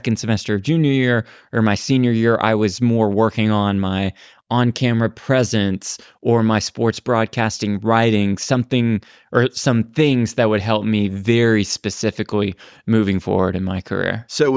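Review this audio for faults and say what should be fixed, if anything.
The signal shows no technical faults, so nothing needs fixing.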